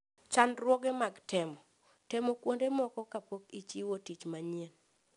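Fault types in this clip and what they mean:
4-bit ADPCM compression: each sample was stored as a coarse 4-bit step from a running prediction, so the coding error becomes a gritty hiss that follows the louder speech and roughens sharp onsets. Nothing is heard above 10.7 kHz, which fits a stream of about 89 kbps.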